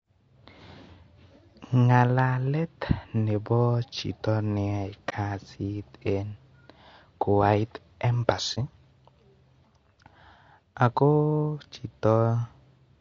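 Throughout the clip the speech sounds rough and grainy, with noise filling the gaps between harmonics and a thin, artificial top band. This is likely low-delay AAC compression (AAC-ELD) at a low bitrate, around 32 kbps. Its short frames resolve pitch poorly. Unlike bandwidth limiting, the damage is texture rather than a missing treble.

At 5.09 to 5.13 s, just before "kasit en", and again at 8.54 to 8.58 s, the sound fades out and back in across a gap of about 30 ms, consistent with a single lost frame. This is AAC frame loss with muting: the decoder zeroed the lost frame's spectrum. The overlapping windows soften the edges.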